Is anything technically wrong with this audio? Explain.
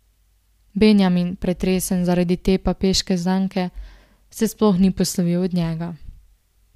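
No, nothing is technically wrong with this audio.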